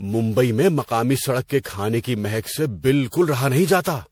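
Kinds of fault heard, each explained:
Generation loss: likely repeated MP3 re-encoding, around ten passes, fitting 96 kbit/s, stacking quantisation noise into swirly, hollow, smeared speech with blurred attacks.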